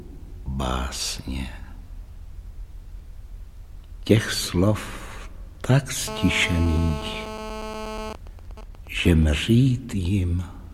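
A nearby 2G handset in an active call leaked its radio bursts into the audio circuit, which rectified them into GSM phone buzz from 6.08 to 8.11 s. The transmitter pulses at 217 Hz, so a hard, raspy buzz rich in harmonics sits about 8 dB below the sound. From 8.11 to 9.35 s the same phone, with its user silent, sends only occasional groups of bursts, producing GSM signalling bursts: even ticks with a longer 217 Hz buzz twice a second, roughly 15 dB down.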